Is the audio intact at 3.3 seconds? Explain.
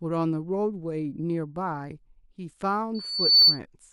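No. At 3.3 seconds a piercing 4.5 kHz tone, built up over a few tenths of a second, sits roughly 15 dB above the speech. This loudspeaker feedback squeal (2.94 to 3.59 s) arises when a microphone picks up its own loudspeaker and loop gain at 4.5 kHz exceeds one.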